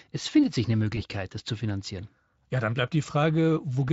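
At 0.95 to 1.02 s, between "es findet sich eine" and "das zu finanzieren", VoIP packet loss concealed by the speech codec: the decoder extrapolates over a 20 ms gap, one frame's worth, giving a brief buzzy or noisy, fading smear.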